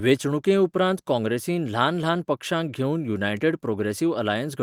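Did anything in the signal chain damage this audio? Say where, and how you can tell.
No, nothing in the signal chain damaged this audio.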